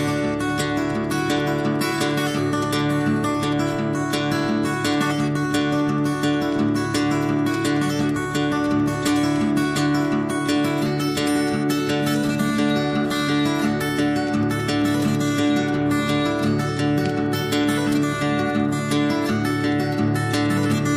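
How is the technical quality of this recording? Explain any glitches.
Nothing in here trips the ear, so there are no glitches to explain.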